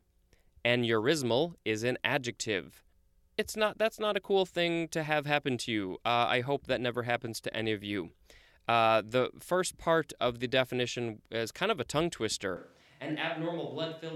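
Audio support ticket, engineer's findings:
Switch to a distant microphone from 12.57 s, after "of a tongue twister", to end: sudden roomy, hollow, bass-light speech, about 10 dB down, noisier. Close mic likely dropped.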